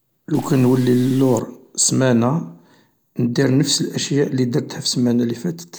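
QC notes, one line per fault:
0.35–1.40 s: stuck bit. Harsh, buzzy distortion rides on the speech, and pauses fill with noise instead of falling silent. One data bit is likely held fixed by a faulty line or converter, shifting about half the samples by a step near -35 dBFS.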